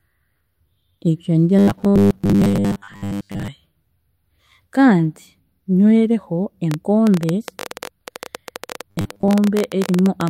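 Just after "ebyo nibyo", from 1.59 to 3.48 s, there is robotic sound from repeated short buffers: a rigid 100 Hz buzz, likely from replaying 10 ms fragments in place of most of the real speech. Unlike clicks, it is a steady pitched tone. From 6.71 to 10.29 s a train of clicks follows, around fifty irregular pops at about 14.6 per second, well above the speech level and likely from interference. The same 100 Hz buzz returns from 8.89 to 9.30 s, likely from the same buffer repetition, while the clicks continue.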